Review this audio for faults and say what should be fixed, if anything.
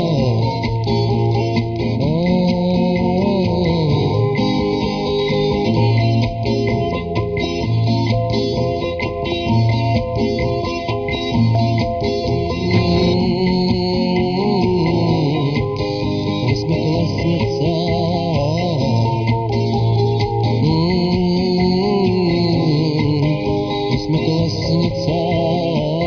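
Nothing in the recording needs fixing. No action is required before it is used.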